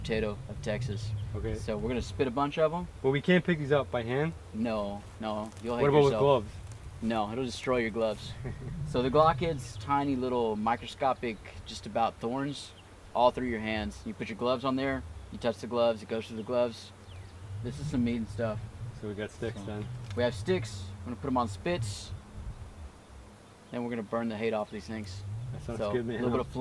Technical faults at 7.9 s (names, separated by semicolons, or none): none